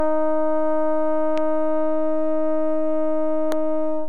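From the first moment to the last, the whole music waveform sits off-centre with a DC offset of about -21 dBFS. You can't hear it as such, since a constant shift has no pitch. What it does is eat into the headroom, so the peaks run out of room sooner on one side, and it shows up as a steady lump of energy right at the bottom of the spectrum.

At 1.38 to 1.40 s there's a loud pop, a single sharp click jumping roughly 10 dB above the music, which just keeps going underneath. It's likely a brief voltage spike, say from a switch, static or a driver hiccup, getting added to the signal. Then at 3.52 to 3.54 s a second pop hits, again a single one but harder, around 15 dB over the music. Same kind of transient, with the playback carrying on straight through it.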